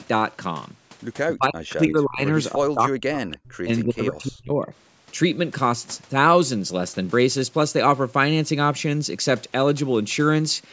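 Speech suppressed in double talk runs from 1.37 to 2.22 s and again from 2.52 to 4.73 s. The voice sinks by up to about 35 dB, then about 40 dB, across roughly 2.7 seconds in total. Most likely the far side spoke at once and the echo canceller, unable to separate the two, turned this talker down with it.

An echo leak appears at 3.32 to 3.37 s, a brief scrap repeating the voice about 0.31 s late, around 20 dB below it, probably residue the far end's canceller failed to remove and sent back.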